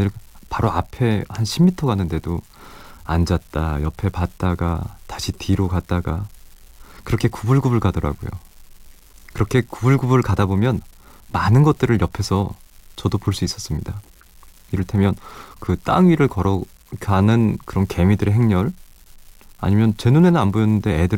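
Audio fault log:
Throughout: unreliable data bit, a marginal bit flipping at random adds equal spikes of about -31 dBFS, so a steady fizz sits under the speech and the pauses.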